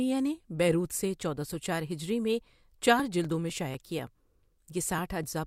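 At 2.50 s, just after "سو چار ہجری میں", periodic USB or driver dropouts begin and run to 5.24 s. Something on the system stalls the USB bus or audio driver every 0.249 s. Each stall skips roughly a millisecond of audio, with nothing put in its place. The speech jumps forward slightly at each gap. About ten of these occur. They sound like a steady train of small ticks, about four per second, riding on the speech.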